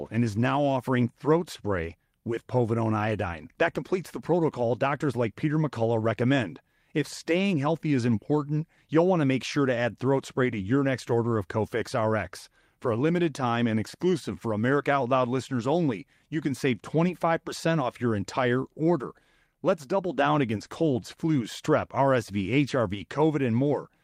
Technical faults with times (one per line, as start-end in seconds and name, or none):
1.89-1.91 lost packet rebuilt from error correction
20.61-20.67 lost packet rebuilt from error correction